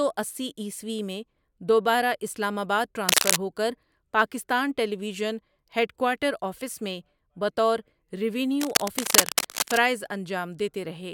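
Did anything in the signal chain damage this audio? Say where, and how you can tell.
Yes, cable scratch noise in the analogue wiring: rustling bursts at 3.09–3.36 s, after "میں دوبارہ اسلام آباد", about 5 dB above the speech, and 8.60–9.78 s at roughly speech level, likely from a worn connector's rapidly changing contact resistance.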